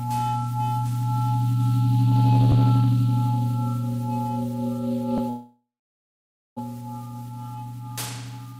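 At 5.29 s the audio cuts out until 6.61 s, a long network dropout, likely. A brief fading buzz gives way to silence, and about one second of sound is lost.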